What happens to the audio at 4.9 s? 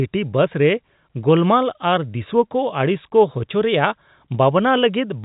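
Nothing goes wrong at 4.9 s: the speech carries on intact through that moment, still band-limited by the G.711 telephone coding, with nothing above about 3.8 kHz.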